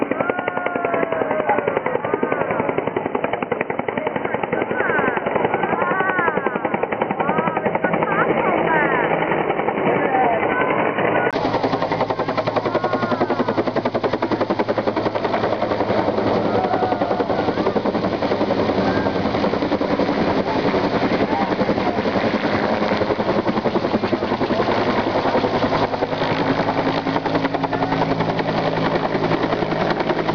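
From the start to 11.33 s the audio is band-limited, with nothing above 3 kHz, giving a dull, boxy tone over a noise floor about 30 dB down. A 20 ms gap then leads to full bandwidth at unchanged level, likely an input switched to a poorer device.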